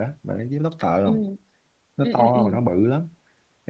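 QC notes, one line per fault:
No faults heard.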